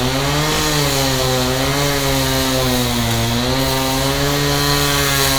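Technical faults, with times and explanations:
No technical faults can be heard in this clip. There is nothing here that needs a time or an explanation.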